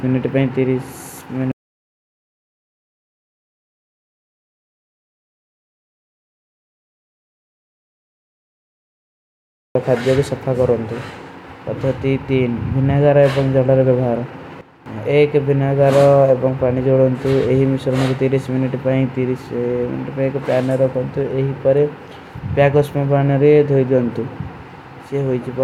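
A speech recording with two faults. From 1.52 s to 9.75 s there is an audio dropout to silence: the speech cuts off and about 8.2 s is simply gone, replaced by silence. Unlike a natural pause, no room tone or hiss remains in the gap, so the input was likely lost, through a disconnected device, a failed link or a mute, while the recorder kept writing. Between 14.61 s and 14.86 s comes a sudden gain jump, with the level falling by about 11 dB. It is not a fade or a speaker moving away, because the background noise drops by the same amount at the same instant instead of easing down. That points to a digital gain setting or bit shift likely applied without a ramp.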